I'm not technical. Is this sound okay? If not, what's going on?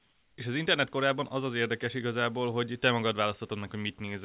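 No. In the first 0.38 seconds, the call system most likely stopped sending sound during the pause, and the receiving end filled the gap with comfort noise in place of the background. This is a flat, quieter hiss that lasts until "és az internet korában" begins.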